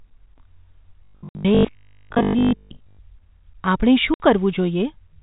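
From 1.05 to 3.01 s the speech takes on robotic sound from repeated short buffers: a rigid 50 Hz buzz, likely from 20 ms chunks being replayed, with most of the audio repeated. On a spectrogram this appears as evenly spaced harmonic lines. At 1.29–1.35 s and 4.14–4.20 s, packet loss filled with silence leaves 60 ms gaps, which fits two 30 ms packets each. These show as flat waveform holes with hard vertical edges, within band-limited G.711 telephone audio.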